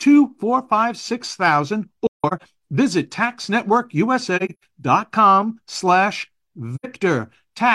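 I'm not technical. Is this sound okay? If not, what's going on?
No. The speech drops out three times, because of AAC frame loss with muting. Pieces of the compressed audio went missing, and the player filled those gaps with silence. The sound fades out and back in softly. The first gap comes right after "four five six thousand", from 2.07 to 2.42 seconds, with the longest silence around 150 ms. The second runs from 4.36 to 4.68 seconds. The last is a brief one, from 6.75 to 6.86 seconds.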